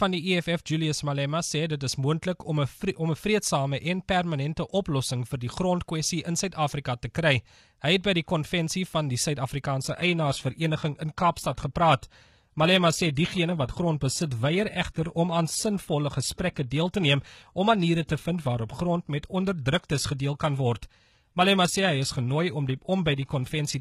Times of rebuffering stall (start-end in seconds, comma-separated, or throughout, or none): none